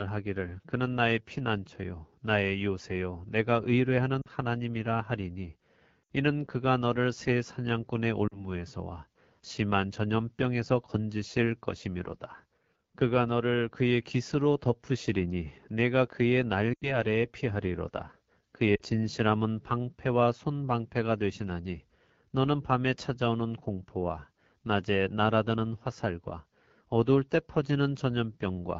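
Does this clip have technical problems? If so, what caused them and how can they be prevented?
Yes. The AMR wideband (HD Voice) codec runs throughout with plainly rough, raspy speech, which fits the low 8.85 kbit/s mode. On a spectrogram, the band above 6.4 kHz looks like smeared noise rather than harmonics. Prevent it by running the link at 12.65 kbit/s or higher.

Lost AMR speech frames occur at 4.22–4.28, 6.04–6.10, 8.28–8.48, 16.74–16.97 and 18.75–18.82 s. During each, the decoder stretches the last sound and fades it, so the voice drops to near silence within two frames and comes back weak or rough for a moment. The concealed stretches are about 40 to 80 ms each, and they show on the waveform as sudden envelope drops. Prevent them by improving radio coverage or error protection so that frames arrive intact.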